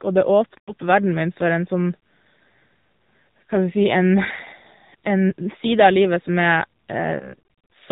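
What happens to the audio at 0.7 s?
Right after "og det", from 0.58 to 0.72 s, you hit lost AMR speech frames. The decoder repeats its last pitch and vocal-tract settings at falling gain, so the sound smears and fades, consistent with about five 20 ms frames missing. Underneath, the AMR narrowband mobile codec is plainly audible: nothing above 4 kHz and a buzzy, synthetic quality that fits a low rate around 7.4 kbps.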